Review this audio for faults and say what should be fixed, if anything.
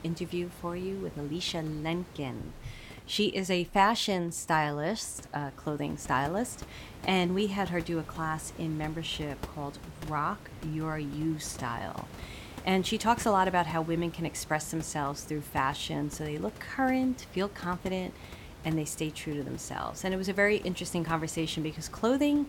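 Nothing needs to be fixed, as the review finds no faults; the room noise about 16 dB below the speech is part of the recording.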